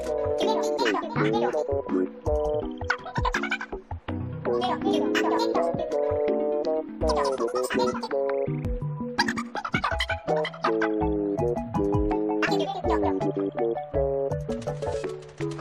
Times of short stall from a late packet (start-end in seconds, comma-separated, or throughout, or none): none